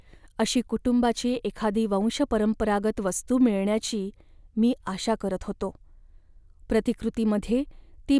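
No technical faults can be heard anywhere in this recording.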